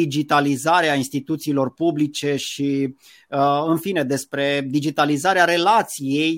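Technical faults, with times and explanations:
No technical faults can be heard in this recording.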